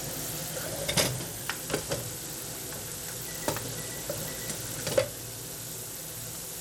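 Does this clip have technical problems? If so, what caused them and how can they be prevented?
Yes. Throughout the clip there is gritty, coarsely quantised noise, with aliasing and an unsteady top end that stops around 19.3 kHz. This is likely Bluetooth SBC compression at a small bit pool, which fits roughly 96 kbps. The sub-band allocation starves the upper bands and quantises the rest crudely. To prevent it, use a higher SBC bit pool or a better codec such as AAC, aptX or LDAC, or record over a wired link.

From 0.63 to 1.51 s the sound plays 6.5% fast and about 109 cents sharp, roughly a semitone, then snaps back. This is likely a drift correction step, where clock-matching software changed the playback rate in one jump to rebalance its buffer. To prevent it, use gradual resampling-based drift compensation or share one clock across the devices.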